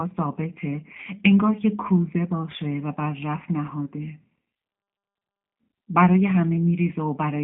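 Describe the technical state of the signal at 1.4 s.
At 1.4 s the speech carries G.729 codec damage, present throughout: nothing above 3.7 kHz, and a rough, synthetic, pulse-rebuilt texture that plain telephone band-limiting alone wouldn't produce.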